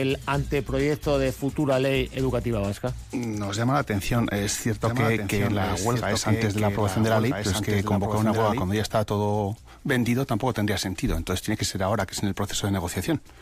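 From 4.84 to 8.62 s there's a doubled audio track: a second, full-band copy trails about a second and a half behind, roughly 5 dB down, dry and with no room tail, and it cuts in and out abruptly. That's likely a slower second capture path getting mixed in.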